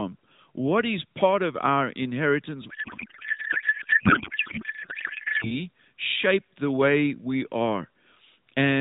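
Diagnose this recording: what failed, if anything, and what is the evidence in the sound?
Codec payload misread at the codec stage, 2.70 to 5.52 s, after "part of our inheritance": speech turns to garbled warble, which fits octet-aligned AMR frames decoded as bandwidth-efficient.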